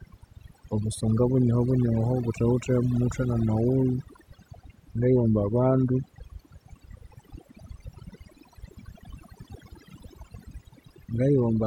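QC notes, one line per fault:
throughout, overdone noise removal: the noise reduction is set too aggressively, so any frequency band near the estimated noise floor is pulled down or gated off. Low-level parts of the speech vanish with it, leaving near-silent gaps with twinkling specks.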